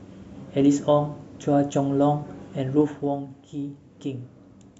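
From 2.73 to 3.24 s the speech drops by around 10 dB through zipper noise. The gain is lowered in discrete 2 dB steps at roughly ten steps a second, with no smoothing between them, so each jump leaves a small discontinuity in the waveform. Those discontinuities are heard as a fast ticking or zipping laid over the speech for the half second the level is falling.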